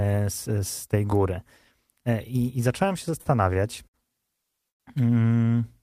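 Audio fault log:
3.21 to 3.96 s: short stalls from late packets, three in a row (3.21, 3.53, 3.88 s), each holding the last sound for 43, 22 and 60 ms while the jitter buffer refilled, so it drags slightly but nothing is lost.
4.69 to 4.82 s: call audio freeze, the sound stretched then dropping to about 100 ms of silence, a 108 ms gap most likely from packets held up in transit emptying the buffer.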